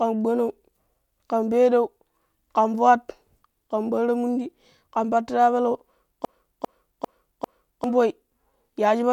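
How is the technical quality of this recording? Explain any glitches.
There's one clear glitch. From 6.25 to 7.84 s, right after "mundi ƙan pattira peleu", a broken-record loop replays a 0.40 s snippet four times. It's likely a stalled stream resending its last fragment, so the speech for that stretch is lost.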